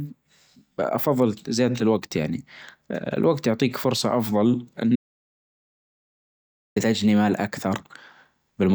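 A speech clip with an audio dropout to silence. After "الوجت يعطيك فرصة أفظل", the sound stops at 4.96 s. It returns at 6.76 s with "تجني مال". The gap lasts 1.8 s and is dead silence, with no room tone underneath. Whatever was said in that stretch is gone. The likely cause is a lost input, such as a disconnected device, a failed link or a stray mute, while the recording carried on writing silence.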